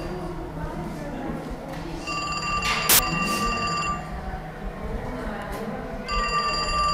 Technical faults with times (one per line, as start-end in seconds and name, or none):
2.89-2.99 samples built from the wrong bytes